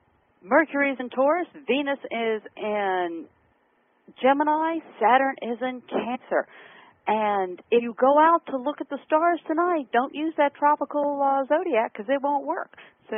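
Compressed frames are skipped at 0.99, 6.14–6.16, 7.78–7.80 and 12.77 s. The decoder drops a few whole frames each time, jumping roughly 50–100 ms ahead.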